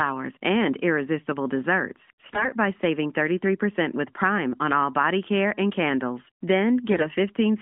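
From 2.22 to 2.48 s and 6.90 to 7.06 s, AMR bit errors strike. Flipped frame bits misplace pulses. The speech turns hoarse and gargly.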